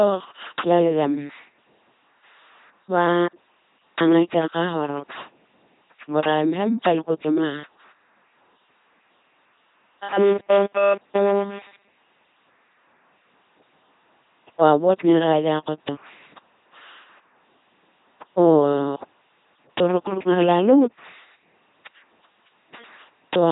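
From start to finish the speech is carried through an LPC-10 vocoder at 2.4 kbit/s, and the damage is heavy. The voice sounds buzzing and mechanical, like a robot. Each moment is rebuilt as either a pulse-driven buzz or pure noise, with nothing in between. Wrong choices turn breathy sounds into buzz and voiced sounds into hiss. A small all-pole filter shapes the tone. Nothing remains above about 3.8 kHz.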